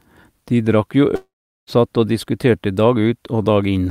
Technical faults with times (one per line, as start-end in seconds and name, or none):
1.15-1.69 long network dropout